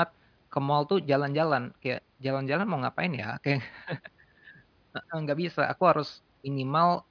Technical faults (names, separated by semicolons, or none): none